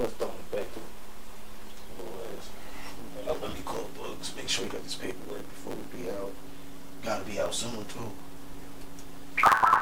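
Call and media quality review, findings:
Block size mismatch (truncated) throughout: writer's blocks, consistent with 512 samples, exceed reader's, tails dropped. Buzz at 109 Hz block rate, audio 1.16x fast.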